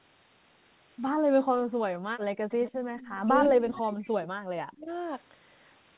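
From 1.17 to 1.74 s, the echo canceller clamped the microphone while the loudspeaker played, so the background gated by the echo canceller drops away by about 40 dB before returning.

Between 2.02 and 2.6 s, the canceller likely mistook both talkers for echo, so the speech is suppressed in double talk, sinking by around 40 dB.

At 2.67–2.77 s and 3.0–3.17 s, the canceller likely let some loudspeaker pickup through as an echo leak, a faint copy trailing 145 ms behind, some 20–25 dB down.

At 2.89–2.95 s, the canceller's gating briefly dips the background again, by about 8 dB.

From 3.24 to 4.9 s, speech is suppressed in double talk once more, dropping by up to around 40 dB. Within it, the echo leak returns at 3.44–3.53 s, roughly 15 dB down, and at 3.74–3.79 s, roughly 25 dB down, both 145 ms behind.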